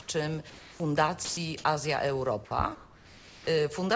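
Between 0.50 and 0.80 s, and again from 2.75 to 3.47 s, the sender likely switched to discontinuous transmission, so the receiver synthesised comfort noise in place of the background. The real background, some 21 to 25 dB below the loud parts, becomes a steady, featureless hiss, about 3 dB and then about 2 dB quieter.

At 1.25 to 1.37 s the voice detector mistook a stretch of the sound for background and stopped sending. Roughly 110 ms of it is lost, replaced by flat comfort noise until the signal resumes, likely a detector misjudgement.

Throughout, nothing above 8 kHz comes through, which fits a wideband call codec such as G.722.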